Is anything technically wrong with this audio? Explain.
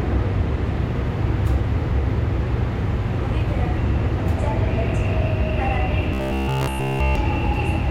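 Yes. Robotic sound from repeated short buffers, 6.14 to 7.15 s: likely buffer starvation, with a 15 ms slice looped throughout, imposing a rigid, metallic 66.7 Hz buzz.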